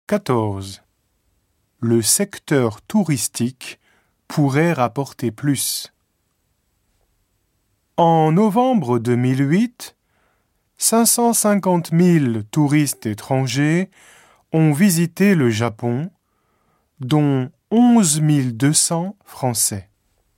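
Speech recording; no technical faults detected anywhere in the clip.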